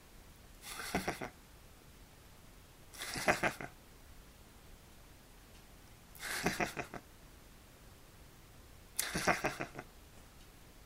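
Block size mismatch (truncated) runs from 0.88 s to the end of this recording of everyday sounds. One stage hands over longer blocks than the next stage takes in, so the tail of every block is discarded, which fits 512-sample blocks being cut short. Each cut leaves a seam, and the seams repeat as a 109 Hz buzz over the sound. Losing those tails also makes events play 1.16 times faster, while the timbre stays.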